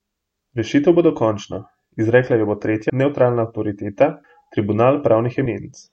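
At 2.90 s, 4.24 s and 5.46 s, compressed frames are skipped. Whole blocks of coded speech never reach the output. The speech jumps forward, losing about a fifth of a second, then roughly 70 ms, then about 100 ms.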